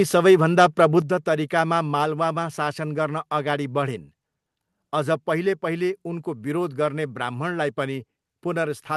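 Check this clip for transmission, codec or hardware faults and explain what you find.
One fault: at 1.02 s the speech and background drop suddenly by about 6 dB, likely a microphone volume stepped down as the input gain was lowered in one step. The Opus call path is audible as a top end ending near 12 kHz.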